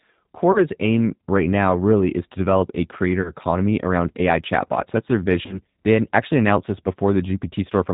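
Throughout, the speech sounds slightly rough and synthetic, with nothing above 4 kHz. This is G.729 codec damage: the sound is rebuilt from a vocal tract filter, a pitch predictor and a few pulses per frame, which fits an 8 kbit/s stream. At 0.52 s, just before "aim right now really", the sound smears into a fading buzzy tone or coloured noise and stays weak until 0.65 s. The same happens from 3.22 to 3.32 s, right after "is to develop a", and again from 5.46 to 5.58 s. Each is VoIP packet loss concealed by the speech codec. About 30 ms went missing, which points to one lost packet each time. The decoder extended its last pitch and filter at falling gain, and recovery took longer than the gap itself.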